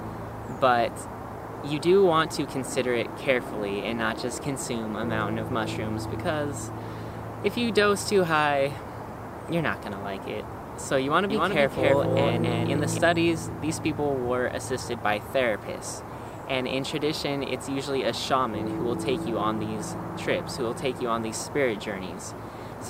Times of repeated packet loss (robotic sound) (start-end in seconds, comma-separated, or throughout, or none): none